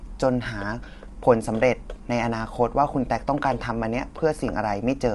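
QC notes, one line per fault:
Throughout: low-delay AAC compression. The speech carries plainly audible coding damage, a rough, grainy texture, and the top band is missing entirely, with nothing above 11.5 kHz. The likely cause is AAC-ELD encoding at a rate that fits about 32 kbps. Its very short frames cannot separate the voice's closely spaced harmonics cleanly, so noise fills the gaps between them, and the limited bit budget forces the highest frequencies to be dropped.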